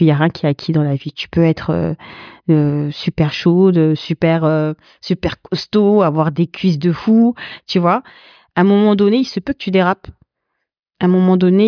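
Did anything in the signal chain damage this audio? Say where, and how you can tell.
No, no signal chain damage.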